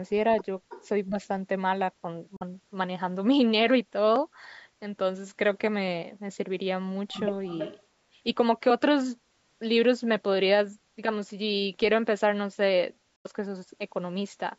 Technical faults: echo leak; speech suppressed in double talk; Bluetooth dropout

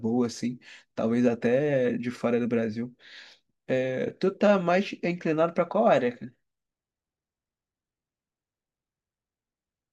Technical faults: none

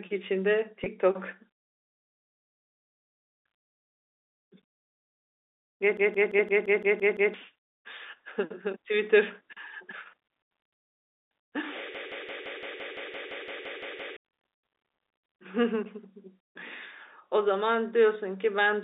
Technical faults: packet loss with pitch repetition; system hang loop

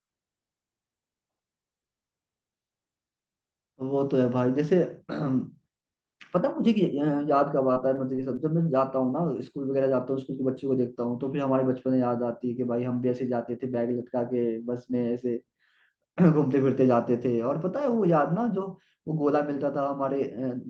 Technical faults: repeated packet loss (robotic sound)

